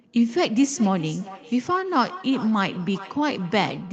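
From 0.43 s to the end there's feedback echo between two devices. A second device in the room replays the call, this mic picks it back up, and the echo canceller misses it. The result is repeats roughly every 0.4 s, peaking about 16 dB under the speech.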